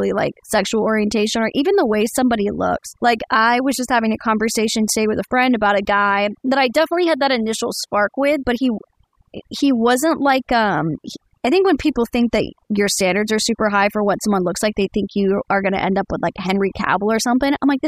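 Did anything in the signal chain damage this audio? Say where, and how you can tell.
Yes: overdone noise removal in call processing, throughout. Bands near the noise floor are gated off, leaving near-silent gaps with twinkling specks and a patchy, holed spectrogram.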